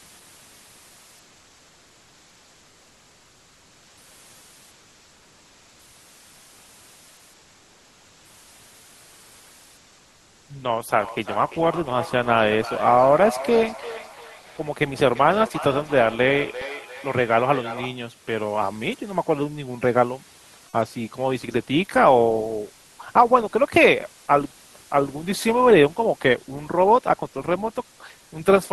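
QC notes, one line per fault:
1.37 s to end: one channel inverted. From 1.37 s the speech drops by about 21 dB and turns faint, with the centred voice largely gone. This is likely one stereo channel with reversed polarity, so the shared centre content cancels when the two channels are summed to mono.
10.99 to 18.07 s: feedback echo between two devices. The speech returns at a fixed interval of roughly a third of a second, each pass thinner and more ringing. The loudest repeats sit about 14 dB below the direct speech. A second device in the room is replaying the call into the microphone, and the echo canceller does not remove that path.
14.41 to 14.57 s: comfort noise in place of the background. For about 160 ms the room background, normally about 33 dB below the loud speech, becomes a smooth, featureless hiss roughly 2 dB louder than before. The likely cause is discontinuous transmission in the Opus call path, with the receiver filling the pause with synthetic noise.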